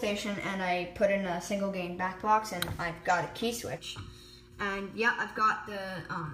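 From 3.78 s to the end at 6.33 s there's channel delay (comb filtering): one side runs late by well under a millisecond, and the mono sum cancels at evenly spaced frequencies starting around 700 Hz, leaving the sound hollow and phasey.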